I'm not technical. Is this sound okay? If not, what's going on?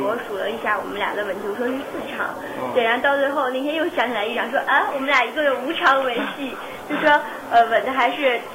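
No, there's a grainy, gritty roughness all the way through that shifts with the sound, most noticeable in quiet parts. That's likely low bit depth without dither, about 7 bits, rounded off.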